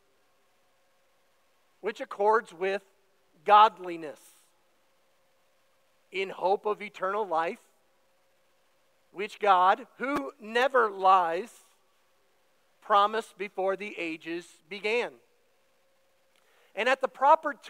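At 10.62 s a sharp snap sits on top of the audio, an electrical switching spike lasting roughly a hundredth of a second and peaking near -25 dBFS. It was likely caused by a nearby switch, motor or static discharge arcing and being picked up by the audio line. On a waveform it shows as a narrow, isolated spike; on a spectrogram, as a thin vertical stripe running across the whole frequency range.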